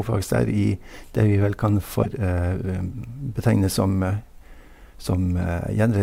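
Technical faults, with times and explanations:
2.00–2.05 s (just after "vel kan") and 5.37–5.40 s: damaged data in a compressed stream. Corrupt frames make the decoder lose sync and search for the next frame header, giving two brief disturbances.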